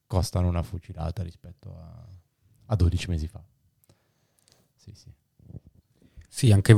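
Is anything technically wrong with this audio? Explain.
No, there's no technical fault.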